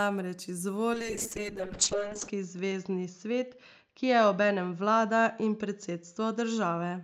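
A speech clip hit by a call bitrate drop. From 0.94 s to the end, the speech turns rough and watery. The top end gets cut off, and the audio bandwidth narrows from 20 kHz to 8 kHz, so it sounds muffled. The encoder was starved of bits after the call's bandwidth estimate fell. The sound points to a fall from around 48 kbps to about 6 kbps. The worst stretch lasts 1.36 s, and the quality never recovers before the clip ends.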